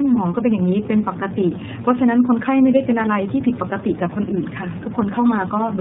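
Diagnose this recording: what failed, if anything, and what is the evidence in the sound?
Throughout the speech the sound is rough, dull and warbly, with nothing above about 3.8 kHz. The damage is heavier than a single low-rate coder would leave, which points to tandem speech coding at the codec stage. The chain sounds like two speech codecs in a row, AMR-NB at 10.2 kbit/s then iLBC at 13.33 kbit/s, joined by a G.711 A-law link. Each border decodes and re-encodes the speech, so the second coder models the first one's errors and compounds the damage.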